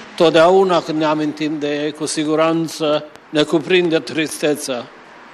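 A train of clicks runs from 2.25 to 4.30 s: about ten near-identical pulses at a regular 4.4 per second, peaking roughly 5 dB above the sound. The likely cause is interference from nearby equipment or a faulty connection or power supply, injecting a steady popping tick over the audio.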